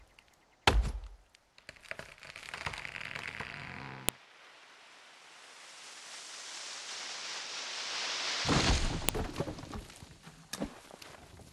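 At 4.09 s and 9.09 s, a file header played as audio: leftover header bytes between 5-second pieces snap loudly, showing as a narrow waveform spike and vertical broadband spectrogram line.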